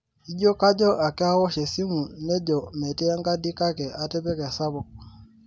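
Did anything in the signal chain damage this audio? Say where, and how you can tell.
No, nothing in the signal chain damaged this audio.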